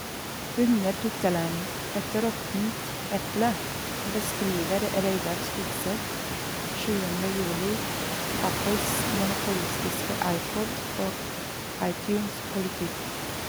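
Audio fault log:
Nothing stood out on listening to this speech recording.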